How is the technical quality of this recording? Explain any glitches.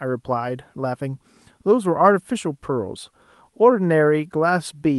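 No glitches or faults heard.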